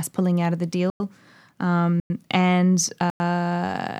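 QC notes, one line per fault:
0.9–1.0 s, 2.0–2.1 s, 3.1–3.2 s, gap between chunks: the speech arrives in blocks of about 1 s, and each join has 100 ms of silence inserted before the next block starts. The first hole follows "pulling out of the". No speech is lost; it is pushed later. Each block stops and restarts abruptly, so the speech breaks into short, hard-edged dropouts at a steady rate of about one per second.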